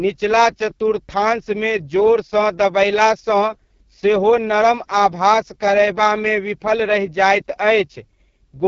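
Throughout, AMR wideband (HD Voice) coding at what sounds like its lowest 6.6 kbit/s mode makes the speech rough and raspy, with nothing above 7.5 kHz.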